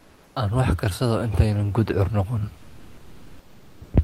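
From 0.00 to 0.35 s and again from 2.57 to 3.93 s, the room's background turns into a flat, featureless hiss about 3 to 4 dB quieter. This is comfort noise in place of the background, likely generated by the receiver while the sender paused transmission during silence. At 3.81 s the speech enters abruptly, with its first 120 ms missing. That is an onset clipped by the voice detector, which likely reacted late and let comfort noise cover the soft start.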